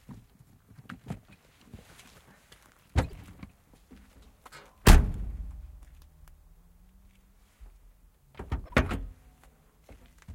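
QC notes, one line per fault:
3.08–3.13 s: corrupt frame decoded. A short chirp-like burst lasts about 50 ms, which fits a few damaged compressed frames. The decoder misread their gains and codes and put energy at the wrong frequencies. Unlike a simple click, the burst lasts for whole frames. It is fairly quiet, roughly -35 dBFS.
8.66–8.74 s: corrupt frame decoded. A second, slightly longer blip of misplaced spectral energy lasts about 75 ms and comes from the same kind of frame corruption.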